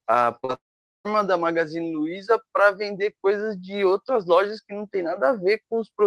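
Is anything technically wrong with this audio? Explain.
Yes. Short concealed packet loss occurs at 0.39–0.45 s and 0.45–0.51 s: each time about 40 ms went missing, and the receiver stretched the preceding speech over it, leaving a brief smear. A long network dropout follows at 0.55–1.07 s: a fading buzz or hiss gives way to about 0.45 s of silence, likely from half a second of lost audio, before speech resumes.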